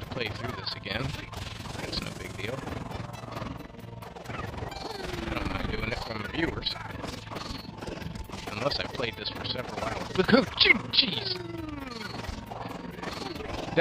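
Overlap-add ripple runs through the whole clip, from start to finish. The audio was split into windowed frames and rebuilt with an overlap whose windows do not add up to a steady gain, so the level swells and dips once per frame, by about 11 dB, around 20 times a second. That regular pumping rides on everything in the clip, heard as a fast, rough flutter, a rough tremolo.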